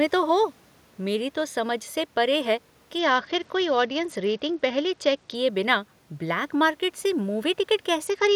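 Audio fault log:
2.99–5.35 s and 8.05–8.35 s: Bluetooth SBC bit pool drop. Treble dulls and grit rises. Fewer bits starve the top sub-bands, which fits a bit pool near 9.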